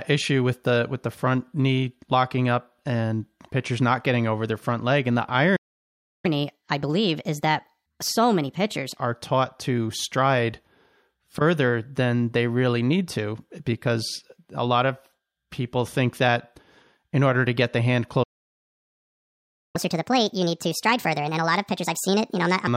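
The player most likely ran short of data or had its thread blocked, causing a playback stall: the speech cuts to silence from 5.56 to 6.26 s, about 0.68 s. To recover lost time, the player then resampled its backlog in a catch-up at higher speed, playing at 1.25 times normal with pitch raised by about four semitones until 8.97 s, just before "are taught to stride". A second, longer stall follows "to get the hand", with silence from 18.23 to 19.76 s, about 1.5 s. Its catch-up runs at 1.5 times speed, with pitch up by roughly seven semitones, from 19.76 to 22.67 s.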